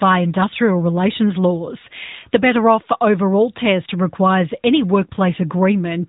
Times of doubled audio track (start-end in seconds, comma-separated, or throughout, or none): none